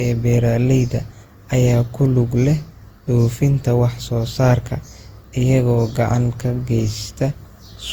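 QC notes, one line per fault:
Throughout: generation loss. Swirly, hollow, smeared speech with blurred attacks, likely from about ten Opus re-encodes near 64 kbit/s, each requantising on a shifted frame grid.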